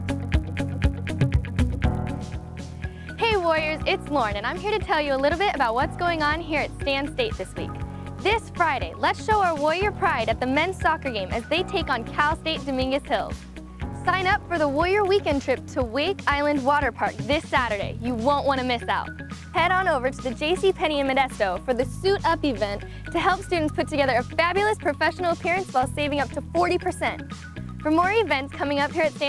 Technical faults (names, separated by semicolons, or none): resampler restarted on every block